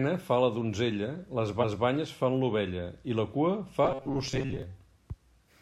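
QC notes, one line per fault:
1.60–1.84 s, repeated frames: after "fa la donzella les", a 232 ms block of compressed audio plays twice before "banyes fan l'ovella i", giving an audible stutter and stretching the clip by 0.23 s.
3.85–4.62 s, robotic sound from repeated short buffers: from "i la cua fa", the speech turns into a rigid metallic buzz at about 134 Hz. Short buffers are likely being looped while new audio arrives too slowly, so roughly half the real sound is skipped.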